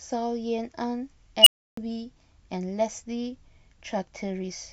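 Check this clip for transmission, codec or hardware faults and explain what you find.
One fault is present, an unstable filter, from 1.41 to 1.77 s in the speech. A recursive filter ran away. A tone around 3 kHz swells over 56 ms into a loud, clipped squeal. The values then overflow, and about 0.31 s of silence follows.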